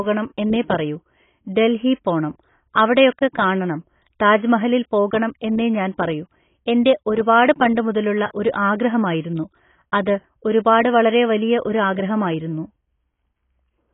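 Throughout the speech, nothing reaches above 3.8 kHz, and the remaining band sounds dull, smeared and warbly, with fizzy sibilants. This is likely heavy AAC compression, with the encoder lowering its cut-off and starving the spectrum in a way that fits a bitrate around 16 kbps.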